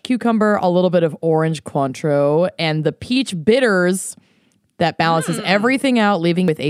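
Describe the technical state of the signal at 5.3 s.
At 5.3 s the signal is intact, with no audible technical fault at that moment.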